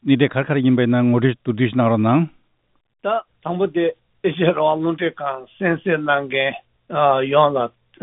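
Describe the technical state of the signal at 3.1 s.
At 3.1 s the audio is intact, with no dropout, glitch or distortion, only the band limit of the call path, with nothing above 4 kHz, which fits narrowband G.711 A-law coding.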